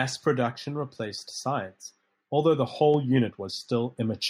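The microphone volume stepped up twice, at 2.94 s and 3.96 s, as the input gain was raised about 4 dB each time, so speech and background jump louder together.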